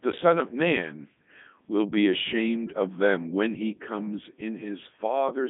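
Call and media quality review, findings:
Codec 2 vocoder, throughout: speech robotic and buzzy, heavy damage, band limited to 150 Hz to 3.7 kHz. Decoder rebuilds the voice from sine waves using only pitch, voicing, energy and envelope, so the waveform is lost. Fits the 3.2 kbit/s mode.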